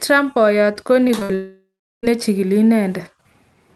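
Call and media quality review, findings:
Brief smear at 1.07–1.11 s: short concealed packet loss. About 20 ms of audio missing, gap bridged by extending the preceding sound before crossfading back. Component: receiver jitter buffer / packet-loss concealment.

Second wobble at 1.19–1.23 s: short concealed packet loss again. About 20 ms lost, bridged by the concealer extending the last segment. Same component.

Held buzz or fading hiss at 1.23–1.31 s: burst of packet loss. About 60 ms lost back-to-back, concealed by repeating and attenuating the last sound. Audio resumes later with that stretch gone. Component: network / jitter buffer.

Decaying buzz/hiss from 1.35 s, then about 350 ms of near silence, audio back at 2.05 s: likely a long network dropout. About 0.68 s never played. Concealment fades out, then mutes. Resumed content skips ahead. Top end rolls off around 12 kHz throughout, which fits Opus at roughly 40 kbps on a WebRTC path.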